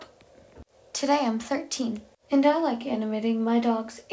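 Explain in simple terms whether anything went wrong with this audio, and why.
Nothing went wrong; the call audio sounds as expected.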